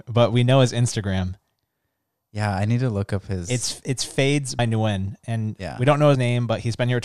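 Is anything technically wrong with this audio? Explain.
Yes. At 4.59 s, just after "it's fades", and again at 6.15 s, the speech jumps ahead, losing about 100 ms and 70 ms. These are compressed frames skipped: the decoder dropped whole frames, which fits roughly five and three 24 ms frames.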